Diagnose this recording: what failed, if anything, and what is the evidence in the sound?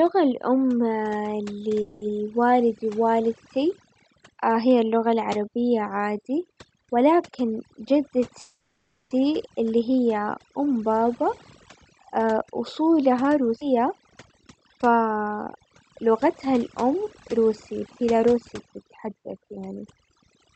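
Overdone noise removal is in play for the whole clip, at the call-processing stage. The background sits near silence with twinkling specks, because a suppressor set too hard keeps pushing individual frequency bands down whenever they come close to its noise estimate.

At 1.81 to 2.03 s and 8.41 to 9.13 s the sound stalls and the last bit is stretched into a fading buzz or hiss, about 0.2 s and 0.7 s. Then speech carries on with nothing lost. That's a call audio freeze, likely packets held up in the network until the jitter buffer ran dry.

Jitter buffer speed-up shows up at 7.44 to 8.18 s, running about 5% fast, and at 14.56 to 20.10 s, about 6% fast. In both spots the pitch holds steady but the delivery feels hurried. The buffer was trimming pitch-period-sized slices to shed excess delay, roughly 40 ms the first time and 300 ms the second.

A skip ahead happens at 13.6 s. Playback jumps forward with hardly any gap, and roughly 200 ms of speech is missing. 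Either the network dropped that stretch or an overfull jitter buffer discarded it while later audio was already queued. The top end stops around 8 kHz, which fits Opus at about 40 kbps on the call path.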